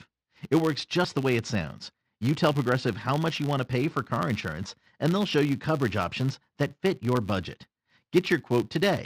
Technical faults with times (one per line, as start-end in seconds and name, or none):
0.00-9.05 filter restarted on every block